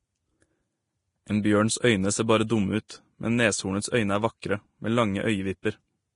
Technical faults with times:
0.00-6.16 Vorbis compression
1.42-1.44 pre-echo
2.47-2.49 pre-echo
2.88 pre-echo
4.41 pre-echo
5.62 pre-echo

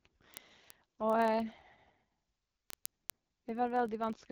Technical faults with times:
0.00-4.31 AMR wideband (HD Voice) codec
0.13-4.31 word clock ticks

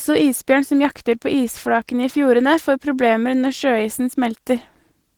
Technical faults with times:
0.00-5.18 Opus voice compression

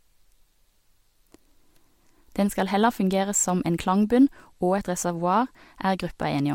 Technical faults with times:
0.00-6.54 sample clock jitter

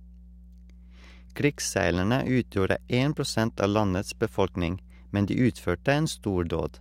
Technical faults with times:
0.00-6.80 mains hum

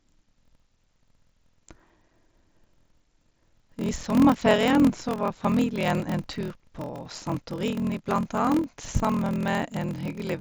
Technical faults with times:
0.00-10.41 block size mismatch (padded)

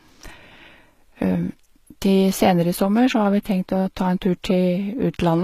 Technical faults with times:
0.00-5.44 HE-AAC compression

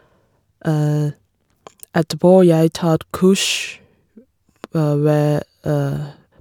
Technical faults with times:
none

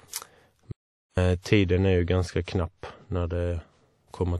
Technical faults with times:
0.00-4.39 WMA compression
0.72-1.17 audio dropout to silence
1.36-3.36 de-emphasis applied wrongly

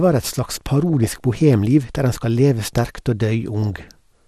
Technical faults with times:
0.00-4.27 MP2 compression
0.83-1.20 DAB burbling
3.62-3.91 DAB burbling

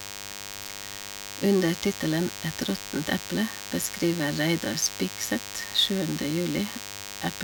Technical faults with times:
0.00-7.43 DECT cordless phone buzz

